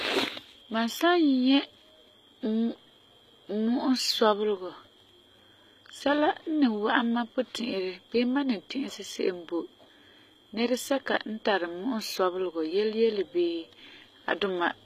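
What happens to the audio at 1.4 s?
At 1.4 s the speech already has the gritty, metallic treble that runs through the whole recording. Sibilants sound lispy and synthetic rather than crisp, and nothing sits above about 14.9 kHz. The likely cause is HE-AAC compression at a low rate, one that fits a bitrate around 20 kbps. Only the lower spectrum is truly coded. The upper bands are rebuilt by copying lower content upward under a coarse envelope, so their harmonics no longer line up with the real ones.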